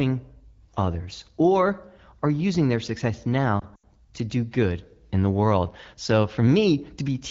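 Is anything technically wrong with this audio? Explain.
Yes. From 3.60 to 3.84 s, just after "are using their success" and before "to do good in", the speech briefly sags and warbles. This is lost AMR speech frames: radio errors corrupted about 100 ms of audio across 240 ms, the longest gap 80 ms, which fits several 20 ms frames. The wideband decoder repeated its last good pitch and vocal tract settings with falling gain, so the sound drops to near silence quickly before the speech returns, weak or rough for a moment. The AMR-WB codec runs at 12.65 kbit/s, and its coding of the speech is light.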